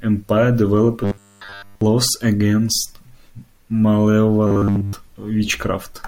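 From 1.04 to 1.81 s, just before "laws against", and again from 4.47 to 4.95 s, the speech becomes a rigid, metallic 100 Hz buzz, robotic sound, that still roughly tracks the words. This is likely from repeating a 10 ms buffer throughout while the real audio was skipped. The fixed buzz pitch distinguishes it from gaps or codec warble.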